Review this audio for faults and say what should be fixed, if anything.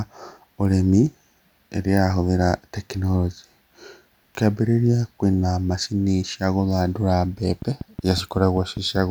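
A train of clicks runs from 7.62 to 8.97 s, most likely from interference from nearby equipment or a faulty connection or power supply injecting a repeated pulse. About seven similar clicks arrive evenly at 5.2 per second, peaking around 5 dB above the speech, heard as steady ticking over it. To prevent it, move the recording chain away from interfering equipment and check the interface's connections and power.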